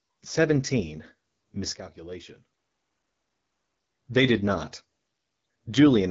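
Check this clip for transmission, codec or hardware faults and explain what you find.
Two faults stand out: the whole clip has been through a low-rate wideband codec, and there's a sudden level drop in the middle.

The AMR wideband (HD Voice) codec runs throughout. Nothing comes through above about 7.5 kHz, and the speech has that rough, raspy edge you get when the pulse-driven vocal tract model is starved of bits. That fits one of the lowest modes, around 8.85 kbit/s.

The sudden gain jump spans 1.75 s to 3.82 s, where everything drops by about 12 dB at once, background noise included, then snaps back. There's no ramp either way, so it's likely a gain setting or bit shift applied instantly rather than a fade.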